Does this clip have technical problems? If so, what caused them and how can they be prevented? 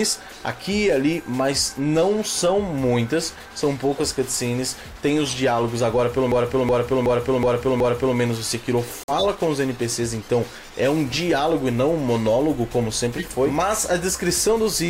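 Yes, there are three.

System hang loop, 6.32 to 8.17 s: the system or audio driver stalled while the output hardware kept replaying its ring buffer, so one 0.37 s slice repeats five times at about 2.69 Hz, a stuttering machine-gun effect. The loop length fits a 16384-sample buffer. On a waveform the same block appears tiled end to end, and a spectrogram shows an identical pattern stamped repeatedly with sharp seams between copies. Prevent it by giving the audio thread real-time priority and having the driver stop or zero the buffer when the host stops feeding it.

Corrupt frame muted, 8.87 to 9.24 s: bit errors damaged a run of compressed frames, the decoder rejected them, and the player substituted silence, which points to about eight consecutive frames. The gap opens abruptly with no fade, and the timing afterwards is intact. The waveform drops to a flat line with clean vertical edges, and the spectrogram shows a full-band empty column. 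Prevent it with error protection or retransmission on the link, plus packet-loss concealment in the decoder.

Corrupt frame decoded, 13.06 to 13.25 s: flipped bits reached the decoder, which played the damaged frames anyway. Misread gains and codes put energy at the wrong frequencies across a few frames and produce a brief burst of wrong sound. The spectrogram shows a short block of misplaced bands or smeared noise that does not follow the surrounding content, and the waveform may show an amplitude jump. Prevent it with checksums so damaged frames are caught and concealed rather than decoded.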